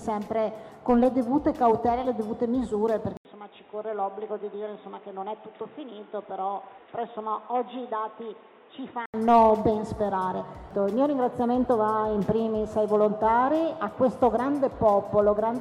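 At 3.17 s the sound cuts out for 80 ms, then turns dull and boxy. Nothing passes above 3.8 kHz. The level falls slightly, over a faint new noise floor. Clarity returns at 9.14 s. The input was likely switched to a poorer device.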